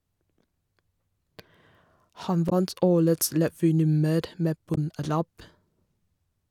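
Damaged data in a compressed stream corrupts this speech recording twice. At 2.49 to 2.53 s and again at 4.74 to 4.78 s, the compressed data was wrong, so the decoder misread the affected frames, lost sync and had to search for the next valid frame header. Each time, this produces a brief 40 ms chirp or blip that cuts abruptly across the speech before clean decoding resumes.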